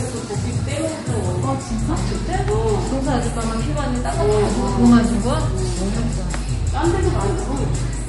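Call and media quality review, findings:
MP3 compression, whole clip: watery, swirly texture and smeared attacks throughout; nothing above 11.2 kHz. Likely a low-bitrate MP3 encode, plausibly around 48 kbps. Short on bits, the encoder dropped the treble at a fixed cutoff and zeroed weak frequency lines frame by frame. Spectrogram: hard horizontal ceiling at 11.2 kHz, with patchy holes flickering in the upper bands. Waveform: transients blurred, with pre-echo ahead of sharp onsets.

Mains hum, 1.67 s to end of clip: steady low 50 Hz tone with low harmonics, loud, only about 5 dB below the wanted audio. Probable component is a ground loop or nearby transformer coupling the power line into the analogue path. Spectrogram: continuous horizontal line at 50 Hz, fainter lines at multiples, starting abruptly at 1.67 s. Waveform: a thickened baseline carrying a regular 20 ms ripple from that point on.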